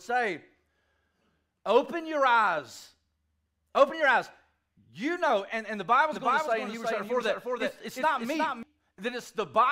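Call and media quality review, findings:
Doubled audio track, 6.13 to 8.63 s: speech heard twice, second full-band copy trailing by around 400 ms, a few dB under the original. Likely cause: a second, slower capture path mixed in, or an edit holding two copies out of step. Distinct from acoustic echo or reverb: a single repeat with no decay tail, no further repeats and no room colouring, and the copy switches on and off abruptly at both ends.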